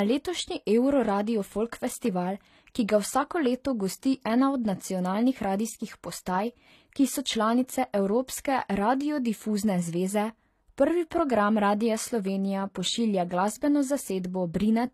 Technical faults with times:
0.00-14.94 transcoding between lossy codecs

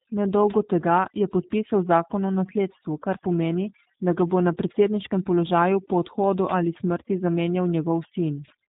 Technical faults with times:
0.00-8.69 overdone noise removal
0.00-8.69 G.729 codec

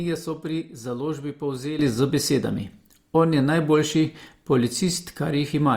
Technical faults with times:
1.79-5.77 sudden gain jump

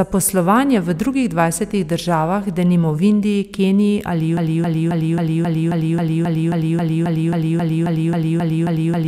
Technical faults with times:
4.37-9.07 broken-record loop

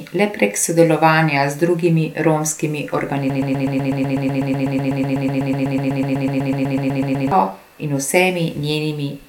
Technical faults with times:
3.30-7.31 broken-record loop

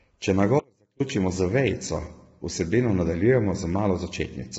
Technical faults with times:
0.00-4.58 low-delay AAC compression
0.60-1.00 audio dropout to a faint residue

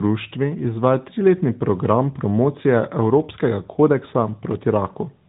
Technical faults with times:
0.00-5.29 tandem speech coding

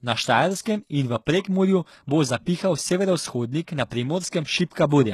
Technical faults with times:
0.00-5.14 HE-AAC compression
0.61-0.66 pre-echo
3.90 pre-echo

